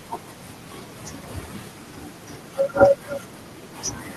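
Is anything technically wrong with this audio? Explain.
Yes. From 2.96 to 3.03 s there is an echo leak: a faint, delayed copy of the speech, about 348 ms behind, well below the main level. The likely cause is a loudspeaker on the far end whose echo canceller let part of its microphone pickup return.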